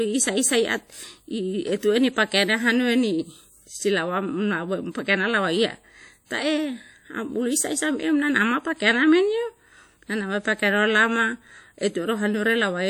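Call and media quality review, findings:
Whole clip: ringing, washy speech with hiss that swells and fades with the signal; bandwidth intact to 20.1 kHz. Likely WMA compression, fits roughly 48 kbps, long transform blocks smearing quantisation noise over tens of milliseconds. Unlike noise-reduction warble, the hiss tracks speech level.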